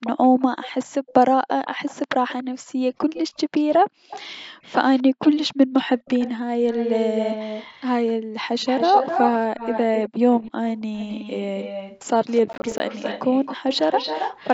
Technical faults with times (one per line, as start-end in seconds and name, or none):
0.04-14.54 echo leak
12.53-12.80 processor overload crackle